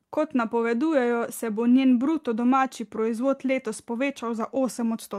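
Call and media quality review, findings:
Nothing to flag on this speech clip; no faults heard anywhere in it.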